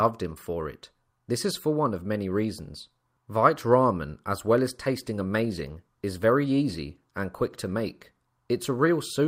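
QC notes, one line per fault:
4.72 s to end, call bitrate drop: just after "as well as" the speech turns coarse and muffled. A falling bandwidth estimate starved the encoder of bits, fitting a drop from 64 to 26 kbps. At its lowest, for 2.7 s, the high frequencies are cut.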